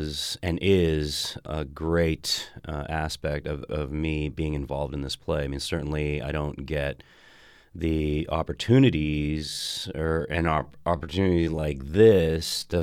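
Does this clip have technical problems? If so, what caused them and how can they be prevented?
Yes. A time-stretched section runs from 8.95 s to 12.82 s, where the speech abruptly slows to about 0.63 times its normal pace while the pitch stays put. To fill the extra length, short fragments of the audio are repeated, so the slowed passage drags rather than sounding simply lower or deeper. This is likely the result of software stretching that stretch of audio to fit a longer slot. To prevent it, trim or edit the material to the required duration instead of stretching it, or keep any stretch factor close to 1.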